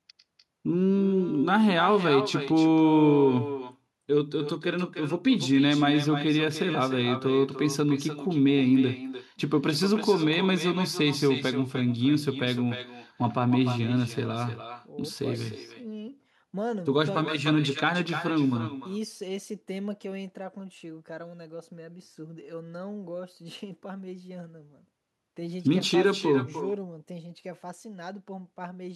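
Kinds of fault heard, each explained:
Echo with no canceller: the far end's loudspeaker feeds the speech into its microphone uncorrected, so each phrase returns throughout, about 12 dB quieter and thinner, roughly a third of a second later. Unlike room reverberation, it is a distinct delayed repeat, not a smeared tail.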